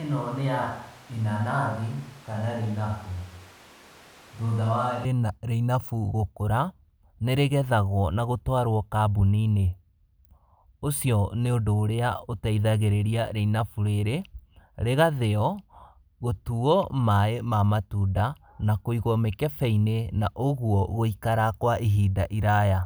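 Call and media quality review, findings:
Roomy, hollow, thin speech from the start to 5.05 s, about 5 dB quieter, noisier room. Likely a switch to a distant microphone, the close mic missing there.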